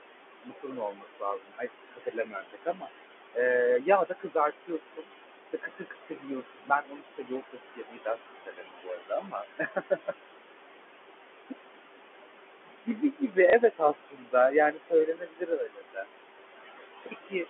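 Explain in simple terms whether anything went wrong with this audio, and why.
Several things went wrong, all in how the call was processed rather than in the recording itself.

The first is noise suppressor artifacts, present the whole way through. A noise suppressor is a filter that tries to remove steady background hiss by turning down whatever it judges to be noise, many times a second. Here it pushes the room noise down hard, so the background drops away in the gaps and swells back under the talking.

The second is speech cut by the noise suppressor. The same filter sometimes mistakes parts of the speech for noise and turns them down along with the background. This happens from 0.43 to 2.9 s, 3.84 to 5.09 s, 5.52 to 10.27 s, 12.65 to 13.37 s, 13.7 to 16.1 s, and 17.03 to 17.46 s. Within those stretches, soft sounds and word endings fade or seem swallowed. It is worst in the long stretch from about 5.5 to 10.3 s, where roughly three seconds are affected.

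The third is packet loss with last packet repeated, from 13.50 to 13.53 s. Calls travel as small chunks of sound, and one chunk seems to have gone missing, about 30 ms worth. Instead of leaving silence, the receiver replayed the previous chunk, so there is a small blip at that point.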